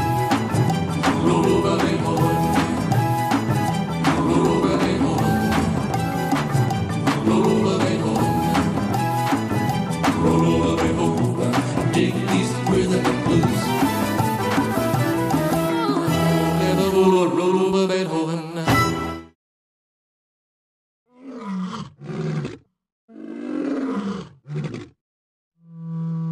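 No technical faults can be heard anywhere in the audio.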